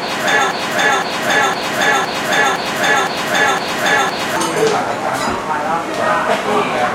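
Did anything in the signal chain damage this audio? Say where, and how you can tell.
Yes. From 0.51 s to 4.36 s the audio turns into a broken-record loop: one piece about 0.51 s long plays back to back eight times, identical each pass, and whatever should have sounded in those seconds never arrives. The likely cause is a stalled playback or stream buffer re-sending the last block it held. Unlike a dropout, there's no silence, and unlike a stutter, the repeats are long and exact, not short varying glitches.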